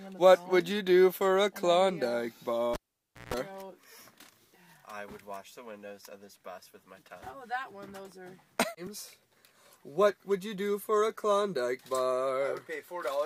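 A pop at 2.74 s, about 0.55 s of near silence, then roughly 0.16 s of 60 Hz hum and a second pop by 3.34 s: a cable pulled and plugged in.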